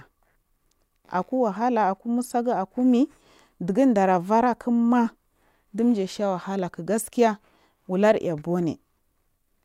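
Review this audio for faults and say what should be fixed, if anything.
Nothing stood out on listening to this speech recording, so there is nothing here that needs fixing.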